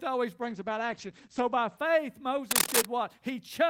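Right around 0.42 s the speech goes soft and watery, which is a classic call bitrate drop. The bandwidth estimate sagged and the encoder got starved of bits, so it coded everything coarsely and chopped the top end from 20 kHz down to 8 kHz. It sounds like a fall from roughly 48 kbps to something near 11 kbps. It sits at its worst for about a second before clearing up by 1.83 s.

Then from 2.51 to 2.85 s there's a burst of dense, uneven scratching laid over the speech, sitting a few dB above it. That's cable scratch noise, and the likely culprit is a worn cable, connector or control being moved, with the contact resistance jumping about rapidly. You get that brief rustly crackle while it shifts, and it stops once things settle.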